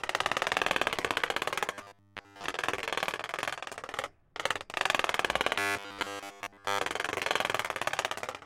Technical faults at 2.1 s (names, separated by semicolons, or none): robotic sound from repeated short buffers